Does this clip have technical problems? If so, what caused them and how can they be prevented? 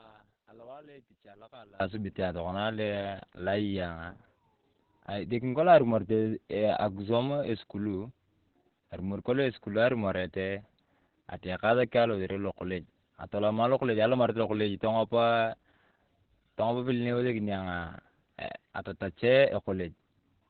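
Yes. The whole clip has heavy Opus voice compression. Nothing survives above about 4.4 kHz, and the speech sounds muffled, hoarse and a bit robotic from coarse linear-prediction coding. That fits narrowband SILK at roughly 8 kbps. Give the encoder more bitrate, around 24 kbps or higher, so it keeps the wider band.

From 0.0 to 1.80 s the speech drops by about 26 dB and turns faint. That's the signature of one channel inverted, likely a polarity flip that cancels the centred voice when the channels are summed to mono. Check polarity on both channels before any mono fold-down.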